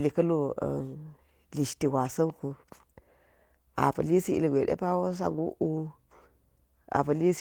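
Nothing in this bit of speech trips any alarm, since there's no technical fault to point to anywhere along the way.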